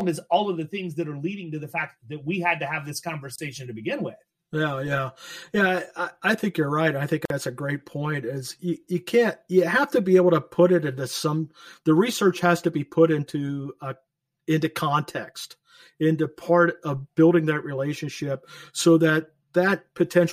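A speech recording with two distinct faults. Throughout, it sounds hollow and phasey from channel delay (comb filtering). One channel arrives around 5 ms late, and the two are summed to mono. Shared content cancels at evenly spaced frequencies, with the first notch near 100 Hz. Two short dropouts are gaps at a join of encoded pieces. The first runs from 3.36 to 3.38 s, about 27 ms. The second runs from 7.25 to 7.30 s, about 48 ms. Each has smeared edges, and the speech resumes where it stopped. Separately encoded segments were joined with their encoder start delay and end padding left in.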